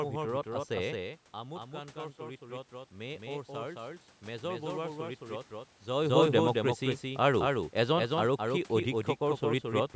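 Throughout, a doubled audio track follows roughly a fifth of a second behind, a few dB quieter and dry, likely from a second capture path; spectrograms show every syllable repeated as a fainter, offset copy. From 0.97 to 5.5 s, after the level falls about 12 dB as the talker moves away, automatic gain rises about 6 dB, lifting voice and background together; the waveform envelope swells gradually.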